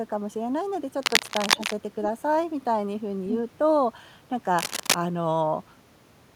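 A speech clip with cable scratch noise at 1.02 to 1.73 s and 4.58 to 4.95 s: dense, uneven rustling roughly as loud as the speech itself, likely from a worn cable or connector being moved. Unlike steady hiss or a single click, each burst is irregular.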